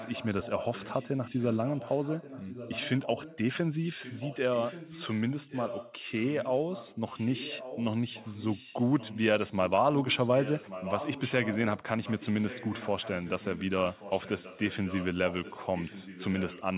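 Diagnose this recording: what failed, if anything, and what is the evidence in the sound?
Echo leak in call processing: speech returns 1.13 s late at 0.0–3.38, 3.89–9.21, 9.94–11.84 (loudest) and 12.03–16.78 s, likely from an incompletely cancelled loudspeaker path.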